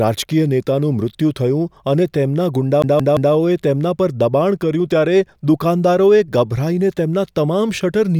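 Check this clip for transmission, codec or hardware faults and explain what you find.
There's one fault here, a CD stuck on one turn, in this speech clip. From 2.82 s to 3.34 s, the same 172 ms slice of audio plays three times in a row, with a tiny mute at each jump back. What's happening is a scratch knocking the laser back a track at the same point on every revolution, so it keeps re-reading that short stretch. You hear it as that quick, even, mechanical stutter of a skipping disc.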